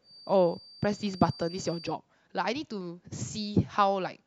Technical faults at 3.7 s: none

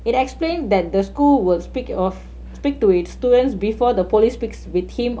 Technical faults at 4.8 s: mains hum

